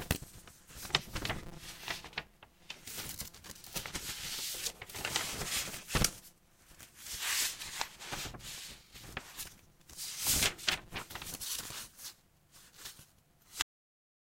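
A filter in the processing chain loses its internal state between blocks and starts each one from zero, so the filter restarted on every block leaves a small transient at every block boundary. Across the whole clip this is heard as a steady buzz at about 172 Hz, which fits a 256-sample block. The buzz rises and falls with the level of the sound, getting stronger in louder passages and receding in quieter ones.

At 13.62 s the final buffers were never written out or played, producing a cut-off end. The sound stops abruptly in the middle of what is happening rather than fading or decaying naturally. It drops straight to digital silence for the remaining stretch of the file, about half a second, with no tail or reverberation. The hard edge where the signal stops can come across as a click.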